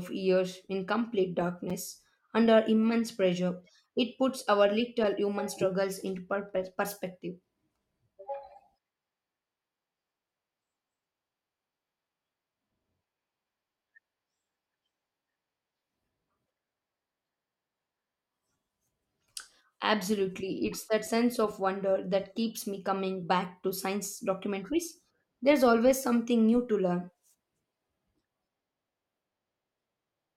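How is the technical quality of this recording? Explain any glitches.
The speech has two brief dropouts, both blocks of digital silence. At 1.70 s, after "years in complete", and at 21.08 s, between "it's that" and "of wonder that keeps", the output buffer likely went unfilled and was zeroed for about 5.8 ms and 2.9 ms, which fits 256- and 128-sample buffers. Each abrupt cut to silence is heard as a tick or dip.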